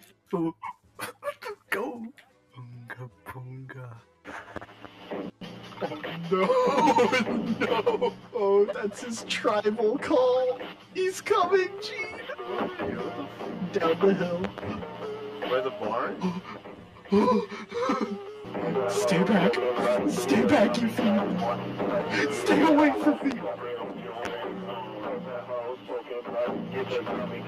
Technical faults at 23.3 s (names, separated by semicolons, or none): channel delay (comb filtering); loud pop